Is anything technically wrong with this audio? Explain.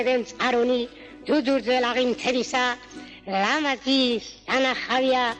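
Yes. There are two short bursts of corrupt frame decoded, at 2.18 to 2.22 s and at 4.93 to 4.96 s, each spanning what sounds like a couple of compressed frames. Flipped bits in those frames led the decoder to misread gains or spectral codes, placing energy at the wrong frequencies. The result is a brief chirp or noisy blip, moderate at the first event and noticeably louder at the second. A dropout or concealed lost packet would produce a gap or a smeared repeat, and a click would be a single instant. Here, wrong sound with its own spectral shape is added and lasts tens of milliseconds.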